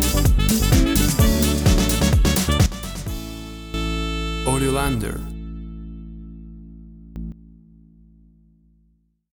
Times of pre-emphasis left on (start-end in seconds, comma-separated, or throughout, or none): none